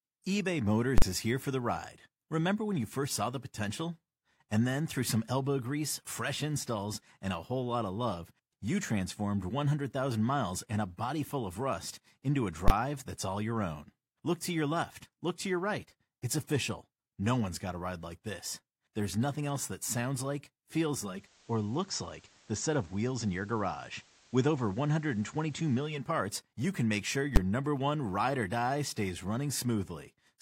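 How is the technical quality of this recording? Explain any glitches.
The recording has two kinds of glitch: three full-scale bursts and one stretch where the sound drops to analogue radio quality.

Invalid numbers at full scale occur at 0.98 to 1.02 s, 12.68 to 12.70 s and 27.36 s. Invalid values were clamped to maximum amplitude, so each block is heard as a loud pop or bang. On a waveform, each is a flat block held at one extreme value.

Digital radio blending to analogue runs from 20.92 to 26.21 s. The receiver cross-fades to FM over half a second with no level change, bringing hiss roughly 30 dB below the speech. On a spectrogram, a faint noise floor appears.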